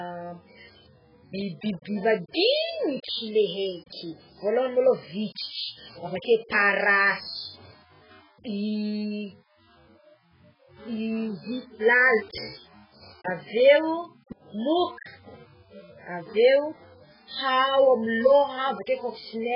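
All the way through, the speech sounds dull and smeary with a warbly, fizzy edge and nothing above 5.2 kHz, likely heavy AAC compression at a very low bitrate, around 8 kbps.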